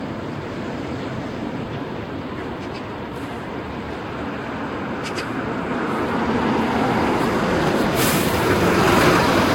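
Throughout the sound, generation loss is audible as a swirly, hollow smear with blurred attacks and nothing above 16.6 kHz. It likely comes from around five successive lossy encodes, consistent with Vorbis near 60 kbit/s, each pass requantising and compounding spectral holes and noise.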